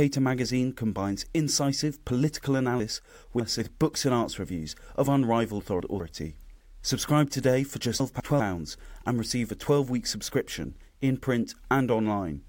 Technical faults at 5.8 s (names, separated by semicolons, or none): chunks out of order